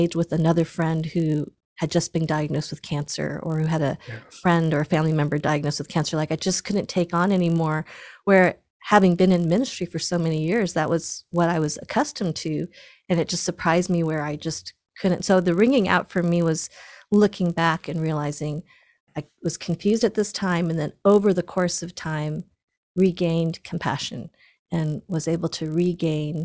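Speech, with a resampler restarted on every block throughout: a 50 Hz buzz rides under the speech and drops out in pauses. Each 20 ms block was converted on its own, likely from 44.1 kHz down to 16 kHz, leaving a small error at every block edge.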